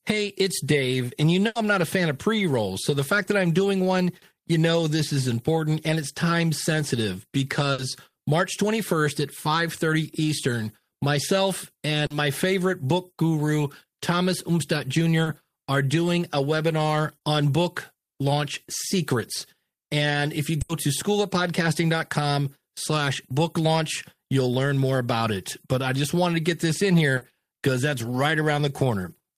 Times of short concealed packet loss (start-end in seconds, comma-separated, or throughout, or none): 12.06-12.11, 15.23-15.27, 27.17-27.22